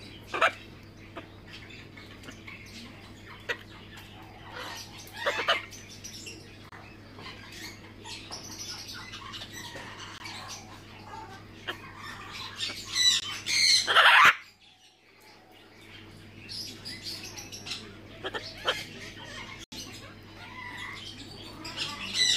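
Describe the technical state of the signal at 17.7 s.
A repeated buffer at 17.63–17.66 s: audio arrived late, so one 10 ms block replayed three extra times. It gives a brief buzz, seen as identical waveform segments with hard seams.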